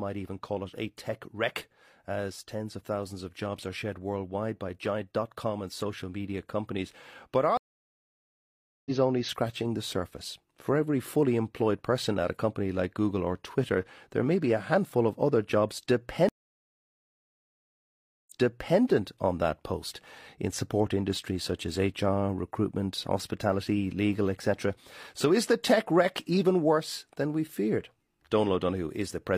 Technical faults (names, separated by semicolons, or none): stream reconnect